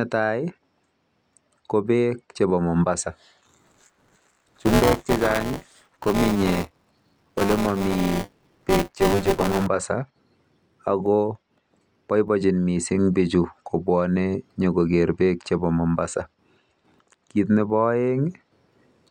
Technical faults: buffer tearing

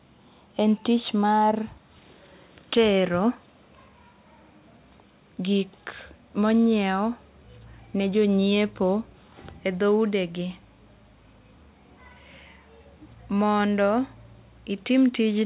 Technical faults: none

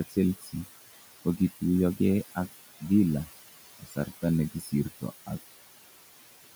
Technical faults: noise suppressor artifacts; speech cut by the noise suppressor

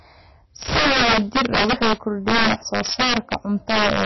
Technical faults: integer overflow; MP3 compression

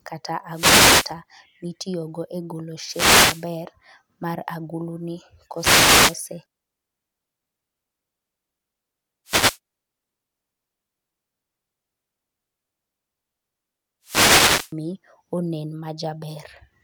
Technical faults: wireless microphone noise hit

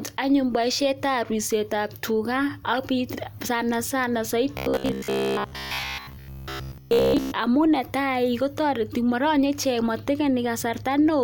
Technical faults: robotic sound from repeated short buffers

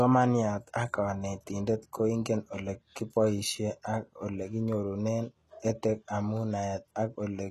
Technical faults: HE-AAC compression

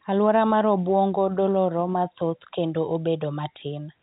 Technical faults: none

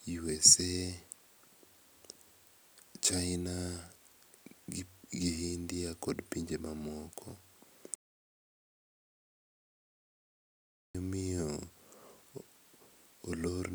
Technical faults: audio dropout to silence

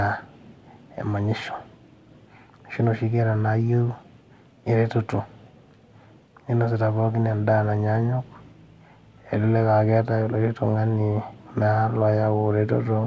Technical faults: none

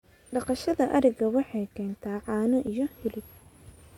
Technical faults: overlap between stream segments

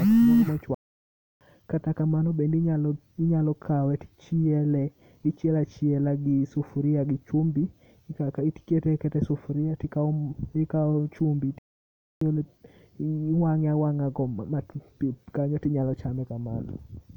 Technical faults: playback stall

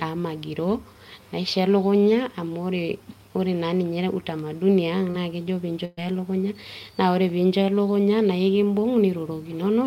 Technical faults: short concealed packet loss; burst of packet loss

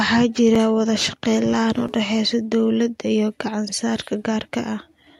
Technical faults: underrun with held sample

